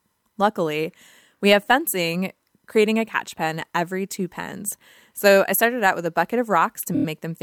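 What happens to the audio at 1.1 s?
Nothing goes wrong at 1.1 s; the audio is intact at that moment, with no dropout, click, distortion or other fault to be heard.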